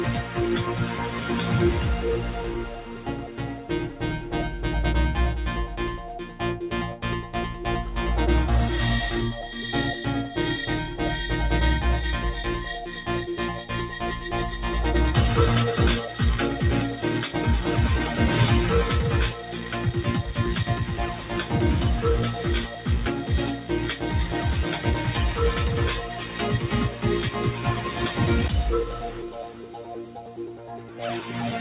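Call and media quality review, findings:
Noise suppressor applied to music or sounds, whole clip. Level swings of around 5 dB as held material and decays get read as noise and pulled down while attacks pass. Probable component: speech-tuned suppressor left active on non-speech audio. Heard through a band edge at 4 kHz, consistent with a G.711 mu-law path at 64 kbps.

Sound cut by the noise suppressor, 0.86–1.26 s (about 4 dB down), 2.69–3.7 s, 19.45–19.72 s, 29.11–31.0 s (each about 5 dB down). Sustained or fading sound judged steady enough to be noise. Suppressor gain drops and tails shorten. Longest stretch near the end, roughly one and a half seconds.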